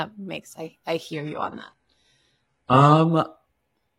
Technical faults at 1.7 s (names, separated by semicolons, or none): adaptive stream at a lower bitrate